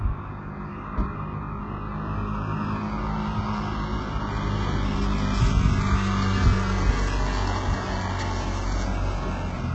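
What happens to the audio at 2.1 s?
At 2.1 s the audio carries the same damage heard across the whole clip, which is likely HE-AAC compression. Heavy codec damage is audible. Nothing reaches above 8 kHz. The upper band sounds bright but synthetic. Its treble seems copied upward from lower bands rather than carried through, so its harmonics do not line up with those below. Hissy or noisy parts turn gritty and metallic. The degree of damage points to a very low bitrate, around 8 kbps.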